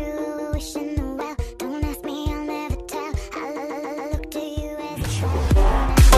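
A short stutter at 0.37 s replays a 139 ms block once, ending at 0.51 s. A longer one at 3.55 s plays the same 139 ms slice four extra times, running to 4.11 s and adding 557 ms. These are repeated frames: a run of compressed frames, consistent with six frames, was written or sent more than once. The decoder replays the same fraction of a second, so the audio loops in place and the clip grows by the repeated time.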